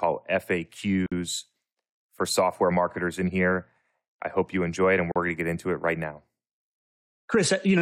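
Gaps at joins of encoded pieces break this speech at 1.06 s (about 53 ms) and 5.12 s (about 40 ms), four seconds apart, where separately encoded segments were spliced with their encoder delay and end padding left in.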